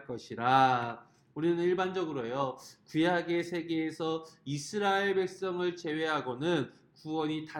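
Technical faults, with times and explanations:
No technical faults can be heard anywhere in the signal.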